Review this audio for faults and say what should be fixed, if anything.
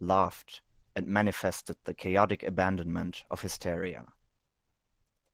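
Nothing in this speech clip needs fixing. The Opus voice compression can be heard as light coding texture, with the band still reaching up to full width, which fits hybrid coding at around 20 kbps.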